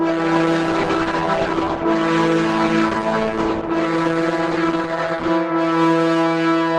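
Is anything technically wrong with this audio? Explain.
Yes, the opening is low quality. For the first 5.29 seconds it sounds like an adaptive stream starting at a low bitrate. The player seems to have begun on a cheap version of the stream so playback could start fast, then stepped up once it had gauged the connection. Until 5.29 s there's nothing above about 12.1 kHz and the codec artefacts are stronger, which fits a low-rate Opus encode around 12 kbit/s. Then the sound suddenly opens up, with no gap, consistent with a jump to something nearer 64 kbit/s.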